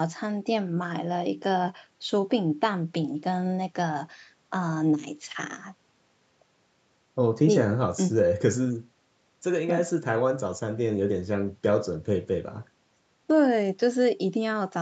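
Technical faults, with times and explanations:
No technical faults, with times and explanations, can be given, as there are none in this clip.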